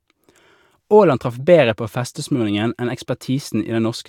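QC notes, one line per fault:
No faults found in this clip.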